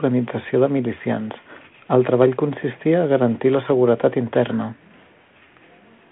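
Listening to this speech clip, nothing stood out as a technical problem at any point.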